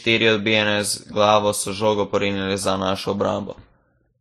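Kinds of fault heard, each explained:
Transcoding between lossy codecs, throughout: two codecs' artefacts layered over the speech and nothing above 14 kHz, likely MP3 near 47 kbit/s re-encoded as Vorbis near 26.6 kbit/s.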